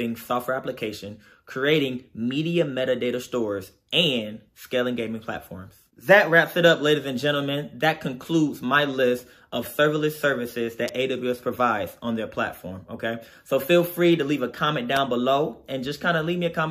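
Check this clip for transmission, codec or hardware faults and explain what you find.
Two hardware-type faults stand out, both the same kind. At 10.88 s and 14.97 s there is an electrical switching spike, a sharp snap or tight cluster of clicks peaking around -15 dBFS and then about -10 dBFS, likely an arc from a nearby switch or motor coupling into the audio line. Each shows as a thin vertical broadband stripe on a spectrogram and a short needle on the waveform.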